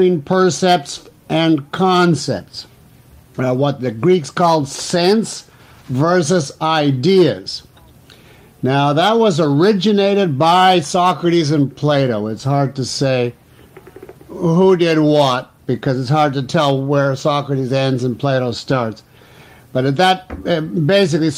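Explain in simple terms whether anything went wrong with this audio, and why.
Nothing went wrong with this audio, because there is no fault to be heard anywhere in it.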